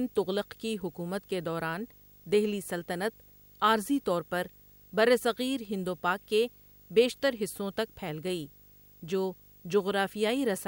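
For the whole clip, video or display buzz couples in roughly 30 dB down: 50 Hz field-rate buzz, hash, and a 15.6 kHz line tone.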